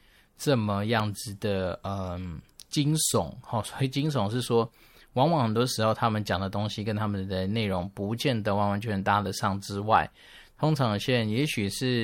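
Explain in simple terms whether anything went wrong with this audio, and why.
Right at the start, from about 1.00 to 1.02 seconds, there is a single sharp pop, clearly louder than the speech around it, while the talking carries on underneath without a break. This is a loud pop. It likely came from a sudden jolt of electricity, such as a plug being nudged, a switch being flicked, a static spark or a brief glitch in the recording hardware, adding a short spike to the signal that the microphone never actually heard.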